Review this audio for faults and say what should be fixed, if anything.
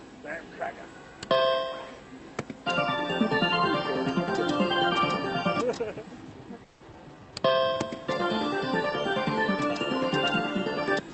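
At 6.63 to 6.82 s there's a call audio freeze. For about 170 ms the tail of the last sound is stretched into a fading buzz, most likely because packets stalled in transit and the jitter buffer ran dry. Nothing is lost, but everything after it lands later. Giving the network path more headroom, or letting the jitter buffer hold a slightly larger reserve, would prevent it.

Right after, at 6.92 to 6.95 s, there's a skip ahead. Roughly 70 ms of the sound is gone, with both sides joined almost directly, as audio was dropped, clawing back some of that extra delay. Making the buffer shrink its delay more gradually would avoid the jump.

From 6.96 to 7.32 s there's a jitter buffer slow-down. The sound plays at about 85% speed at unchanged pitch, with 64 ms added by repeating tiny slices to rebuild the reserve. A steadier buffer target would prevent it.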